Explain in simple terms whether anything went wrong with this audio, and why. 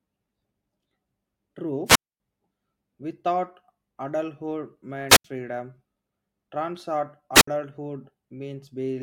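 The speech cuts out three times, at 1.86 to 2.20 s, 5.09 to 5.25 s, and 7.34 to 7.48 s. Each is a wireless microphone squelch dropout. The radio signal fades, hiss rises, and the receiver mutes the sound briefly. The first gap lasts about a quarter second.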